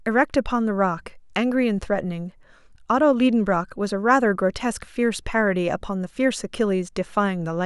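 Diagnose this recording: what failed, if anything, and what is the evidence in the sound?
Nothing failed, and the speech holds no audible evidence of a fault at any stage.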